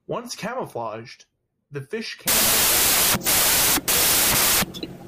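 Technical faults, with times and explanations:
2.28–5.08 s, wrong sample width: after "camouflaged the fish", 16-bit samples are read as packed 24-bit ones, so each value straddles mismatched bytes. The sound collapses into loud noise with the speech buried, running 1.5 times too fast and high-pitched.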